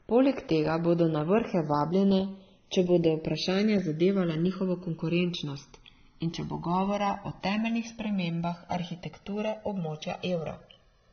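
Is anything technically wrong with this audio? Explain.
Yes, there are two problems, both running through the whole speech clip.

First, the channels drifting apart: the two sides seem to be on separate clocks, off by around 150 ppm, so the delay creeps to roughly a millisecond and a half. Summed to mono, that's a slow flanging sweep.

Second, transcoding between lossy codecs: nothing above 6.3 kHz, with layered artefacts from different codecs heard together that point to a low-bitrate AAC pass likely followed by WMA re-encoding.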